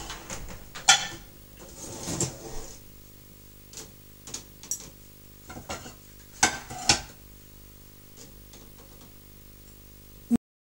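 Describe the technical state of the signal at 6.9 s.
At 6.9 s, video or display buzz sits under the sound, as it does for the whole clip. A screen or video cable is leaking into the audio path. It gives a 50 Hz buzz with hash above it, plus a thin 15.6 kHz line tone, roughly 25 dB below the sound.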